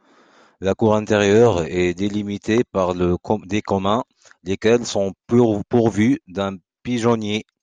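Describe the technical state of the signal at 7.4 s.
At 7.4 s the speech signal is intact, with no audible technical fault at that moment.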